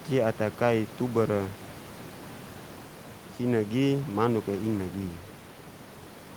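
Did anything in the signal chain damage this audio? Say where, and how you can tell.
No; just room noise, about 19 dB under speech.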